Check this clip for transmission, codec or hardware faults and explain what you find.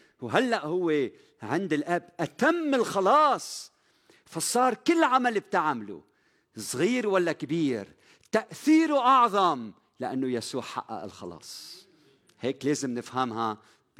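Nothing turns up here at all, so there's no transmission, codec or hardware trouble to report in this bit of speech.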